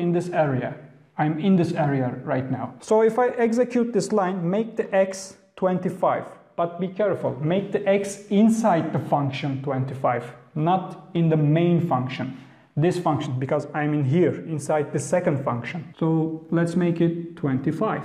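No faults are audible anywhere in this audio.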